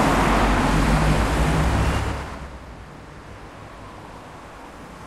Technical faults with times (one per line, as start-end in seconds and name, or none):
0.68 dropped buffer (overrun)
1.64 dropped buffer (overrun)
3.72 dropped buffer (overrun)